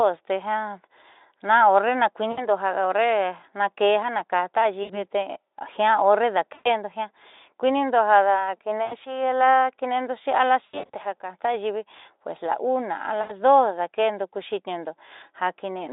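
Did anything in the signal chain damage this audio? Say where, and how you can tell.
Yes. At the network stage, the speech briefly smears into a buzzy tone or a fading coloured noise at 2.31–2.47, 4.83–5.02, 6.53–6.68, 8.85–8.94, 10.65–10.96 (scattered gaps) and 13.21–13.32 s. This is VoIP packet loss concealed by the speech codec: the Speex decoder extrapolated across the missing packets and then recovered slowly.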